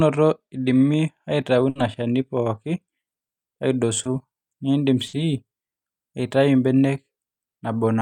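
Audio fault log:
1.69 to 1.77 s and 5.07 to 5.15 s, burst of packet loss: Each time, a run of packets failed to reach the decoder in time, leaving a hole of about 60 ms. The receiver bridged it by extending the last sound it had and lowering its level as the gap went on, so the sound there becomes a brief held buzz or fading hiss. The audio then picks up again further along, and the 60 ms in between is gone.
4.03 to 4.07 s, short concealed packet loss: A fragment of about 20 ms arrived too late to be decoded. The receiver covered it by continuing the preceding sound, following its pitch where it was voiced and using shaped noise where it was not, then blended back into the real signal. The result is a quick smear or wobble, and a short sound such as a consonant may drop out entirely.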